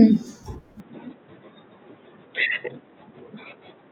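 At 0.8 s the sound abruptly turns duller and boxier and stays that way to the end, with no gap at the change. From there nothing is heard above 3.9 kHz, the level shifts by about 5 dB, and a new background noise sits roughly 40 dB under the speech. This is most likely the input switched to a poorer device. A plain band-limiting filter would narrow the band but leave the level and noise floor untouched, whereas here the band, tone, level and noise all change at the same instant.

From 2.90 to 2.96 s a short garbled flutter breaks the flow. This is frames out of order: two neighbouring blocks, each about 24 ms and consistent with one codec frame apiece, were decoded in swapped order, so that brief stretch plays with its halves exchanged and leaves a discontinuity at each of the three joins. Packet loss would leave a gap or concealed fill, but here nothing is missing and the timing afterwards stays intact.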